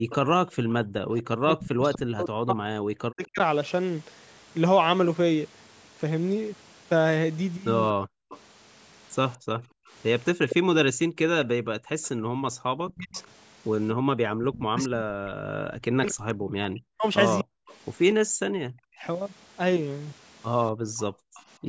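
From the start to 3.39 s, speech suppressed in double talk is the likely cause of the dips: with both sides talking, the echo canceller could not tell the near talker from loudspeaker echo and turned everything down, so about two seconds of speech sink by as much as about 40 dB or break into pieces. Over almost the same span, 0.11 to 3.26 s, an echo leak lets through a delayed copy of the voice. The far end's canceller likely left part of its loudspeaker pickup in place, and that residue returns 243 ms late at about 15 dB below the speech.

From 7.94 to 19.06 s the double-talk suppression returns, costing roughly four seconds of speech in drops of up to about 40 dB. Inside that stretch, from 8.27 to 12.57 s, background gated by the echo canceller appears: while the loudspeaker was active, the canceller pulled the microphone down hard, and for about 0.7 s in total the room tone vanishes by about 40 dB before recovering. 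An echo leak runs from 8.29 to 13.27 s at the same 243 ms delay and about 10 dB under the speech, which makes it the most audible repeat in the clip. A short scrap of echo follows at 17.39 to 17.75 s, about 20 dB down.

Between 18.26 and 21.67 s the background is gated again, with about one second of room sound dropping out by up to about 40 dB. A final weak echo, about 25 dB down and still 243 ms late, sits at 20.97 to 21.42 s. Throughout the clip, the call's microphone processing leaves nothing above 8 kHz.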